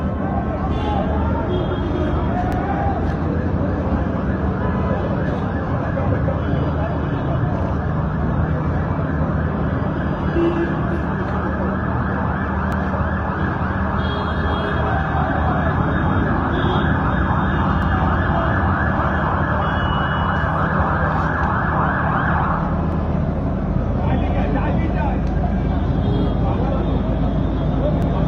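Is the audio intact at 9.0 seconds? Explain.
Yes, the audio is intact at 9.0 seconds, with nothing at that moment beyond the ordinary character of the call codec path it was carried through.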